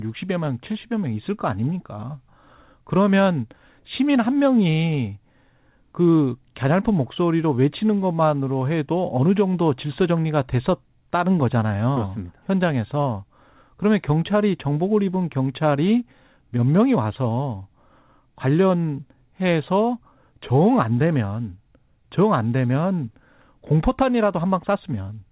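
Nothing goes wrong anywhere in this speech clip; it simply carries the narrow telephone sound of G.711 coding, with nothing above 4 kHz, which is just how that format works.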